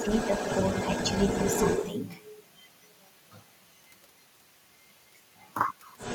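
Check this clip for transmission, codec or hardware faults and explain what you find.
Two echo-control faults are audible in the speech, each pointing to an echo canceller struggling with a far-end signal.

Speech suppressed in double talk occurs briefly from 0.00 to 0.06 s and again from 1.56 to 1.60 s. The talker's level dips by roughly 5 dB, likely because the canceller could not separate near speech from loudspeaker echo and attenuated both. On a waveform these show as short notches in the envelope, with fainter energy on the spectrogram.

The other side's voice leaking through runs from 0.00 to 1.91 s, roughly 5 dB below the talker, and returns from 5.97 s to the end, roughly 10 dB down. Residual loudspeaker pickup likely escaped cancellation. It sounds like a second voice. On a spectrogram it appears as a faint, overlapping harmonic pattern.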